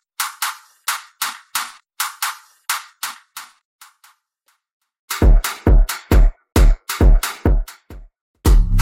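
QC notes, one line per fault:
No faults found on this pass.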